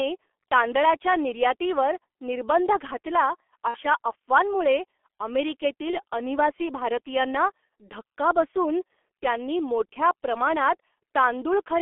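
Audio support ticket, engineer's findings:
G.723.1 codec, full clip: muffled, hoarse, consonants smeared; band limited to 300 Hz to 3.4 kHz. Heavy coarse damage fits the 6.3 kbit/s mode. Slow 30 ms voice-model updates blur transients, unlike plain band-limiting, which stays clean.

VoIP packet loss concealed by the speech codec, 3.68 to 3.79 s: sound stretched into a fading buzzy tone or coloured noise, about 60 ms, fits two lost 30 ms frames. Decoder repeated last pitch and filter at falling gain. A dropout would leave silence.

Same, 5.91 to 6.01 s: shorter concealment, about 30 ms, one frame. Weakened, distorted audio persists briefly after, as frames rebuild on the concealed state. Jitter-buffer glitches would click or skip instead.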